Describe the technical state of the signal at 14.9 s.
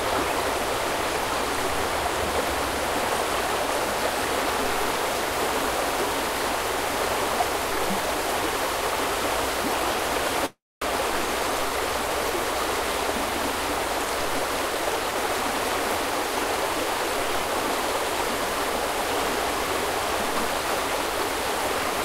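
The sound briefly runs hurried at an unchanged pitch, about 12% fast, from 14.75 to 15.29 s. This is a jitter buffer speed-up: the receiver, holding excess buffered audio, trimmed repeated pitch-period-sized slices, around 70 ms in total, to catch up.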